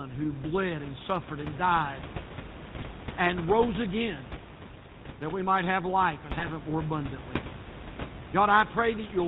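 The speech carries GSM full-rate codec coloring from start to end. The codec rebuilds the voice from a vocal-tract model driven by sparse pulses. Nothing passes above 4 kHz. The result is a plainly buzzy, gravelly roughness, which fits a 13 kbps full-rate stream. Room noise sits about 13 dB below the voice.

GSM bit errors strike twice. From 2.76 to 2.84 s, just before "and rose again", corrupted filter, pitch and gain values make the sound squawk and gargle. From 6.39 to 6.48 s, between "might have life and" and "it more abundantly", a second burst pops through. Each burst spans about 80 to 90 ms, which points to a few damaged frames.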